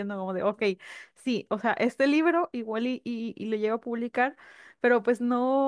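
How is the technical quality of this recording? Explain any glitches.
No technical glitches can be heard in this speech recording. Nothing in the signal stands out as a fault at any point, so there is nothing to explain.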